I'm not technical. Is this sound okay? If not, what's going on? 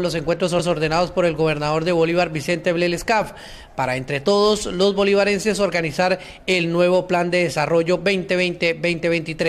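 No. At 0.58 to 0.72 s there are repeated frames. A 0.14-second piece plays twice, causing a brief stutter and making the audio slightly longer.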